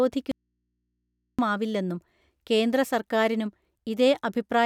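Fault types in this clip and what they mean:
Audio dropout to a faint residue: the speech cuts abruptly at 0.32 s and returns at 1.39 s, leaving only mains hum far below the signal. This is likely a live input losing its source, not a pause or fade.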